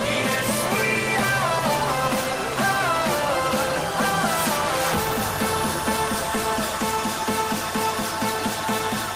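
Nothing in the audio stood out as a technical problem on listening.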